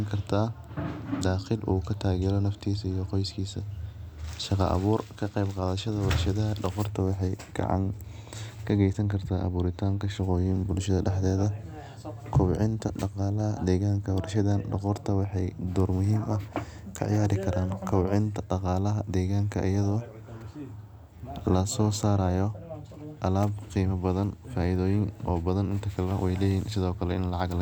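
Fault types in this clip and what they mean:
Nothing in the speech stood out as a fault on listening.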